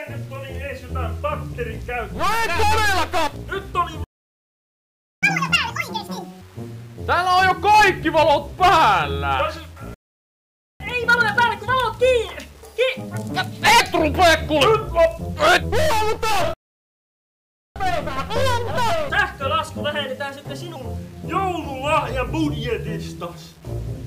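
Throughout, quiet passages sound gritty and grainy in step with the sound: low bit depth without dither, likely 7-bit rounding, leaving error about 30 dB down. On a waveform this shows as visible staircase steps; on a spectrogram, as signal-dependent hash.

At 4.04 s, a playback stall cuts the sound dead for 1.18 s, likely because the player ran out of data. From 5.23 to 6.41 s, catch-up at higher speed runs the audio at 2× with pitch about 10 semitones up.

At 9.94 s, a second stall silences 0.86 s. Catch-up then plays at 1.25× from 10.80 to 13.80 s, about 4 semitones sharp.

At 16.54 s, a third stall lasts 1.22 s. Catch-up at 1.15× runs from 17.76 to 20.76 s, about 2 semitones high.

Each stall appears as a flat, empty gap on the waveform and a blank vertical band on the spectrogram. Each catch-up shows as compressed waveform detail and harmonics shifted upward before they return to normal.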